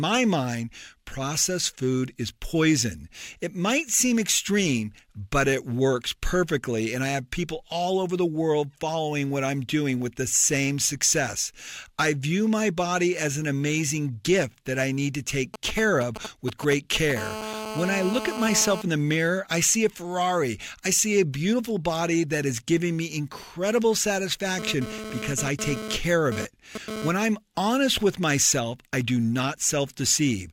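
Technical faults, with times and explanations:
15.54–17.12 s, GSM signalling bursts: Right after "that I need to", a nearby 2G handset is exchanging short signalling bursts with its network, and the audio circuitry is demodulating the radio energy as though it were sound. The result is a galloping dit-dit-dit of short buzzes pulsing at 217 Hz, sitting roughly 10 dB under the speech and bearing no relation to it.
17.17–18.82 s, GSM phone buzz: A nearby handset is now in a call, transmitting continuously at its 217-per-second burst rate, and the circuit rectifies every pulse. A hard, raspy 217 Hz buzz thick with harmonics holds steady at about 8 dB below the speech until just before "in the mirror I".
24.59–27.09 s, GSM phone buzz: The handset is moving data, so its 217 Hz bursts start and stop with the transfer. The same harmonic-rich rasp, about 8 dB below the speech, cuts in and out irregularly, ending just before "I'm honest".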